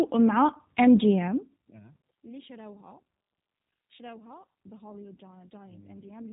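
From start to finish the speech carries plainly audible G.729 codec damage, with a slightly rough, synthetic edge that fits the 8 kbit/s rate of G.729A. The codec doesn't send the waveform itself. It models each 10 ms frame with a vocal tract filter, a pitch predictor and a handful of pulses, so what you hear is a resynthesis. Everything above about 3.8 kHz is gone, which leaves consonants dull and the whole thing boxy.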